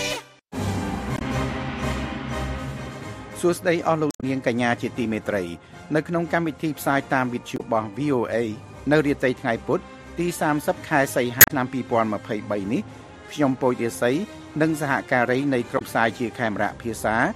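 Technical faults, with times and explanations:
1.14–1.22 s, 4.08–4.24 s, 7.54–7.61 s, 11.38–11.51 s and 15.75–15.82 s: damaged data in a compressed stream. Corrupted frames throw the decoder out of sync while it hunts for the next header, producing brief chirps or squawks.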